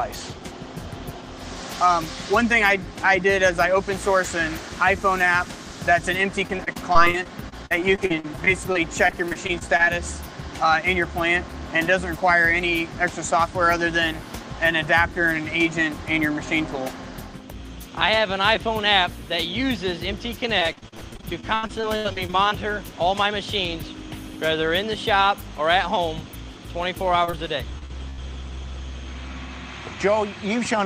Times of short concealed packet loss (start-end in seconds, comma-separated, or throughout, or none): 27.25-27.35, 27.79-27.91